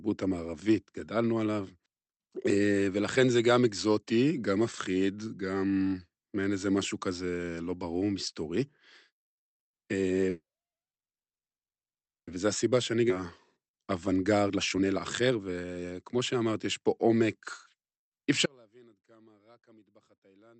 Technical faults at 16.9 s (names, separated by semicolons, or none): jitter buffer speed-up